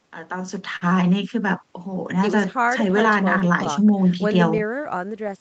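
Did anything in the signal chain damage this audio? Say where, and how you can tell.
Yes, at the network and buffer stage. The clip shows clock drift between sender and receiver. The sender's clock runs a few percent slow, so the jitter buffer keeps draining and the receiver has to pad the sound to keep playing. That gives a steady one-directional lag across the whole clip. Network jitter, by contrast, would push the timing both ways at random, and a local buffer fault would add clicks at regular intervals.

The repeated timing corrections run from 0.03 to 5.23 s. They play the audio at about 98% speed and add roughly a tenth of a second in total. Each one is a small repeat or stretch at an uneven point. That sets them apart from a resampling error, which would shift pitch smoothly and would not hiccup.

A short stall from a late packet sits at 0.76–0.84 s. The buffer ran empty, and the receiver held the last sound for 51 ms, giving a slight buzz or dip before playback resumed. 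No audio is missing, and the delay grew by 51 ms. A lost packet would leave a jump or a dropout instead of a held sound with nothing skipped.

There are scattered short gaps in two stretches. The first runs from 1.96 to 3.68 s with about seven patches, and the second from 4.09 to 4.87 s with about four. Each is around 10 ms and gets patched by continuing the previous sound. They come through as brief ticks or smears rather than silences. That points to concealment of single late packets, not codec damage. The Opus path's 8 kHz band limit sounds as expected.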